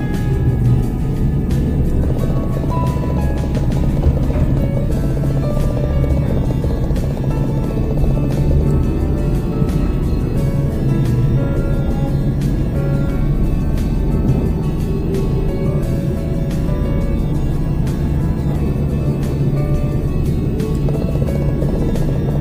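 No technical faults are audible.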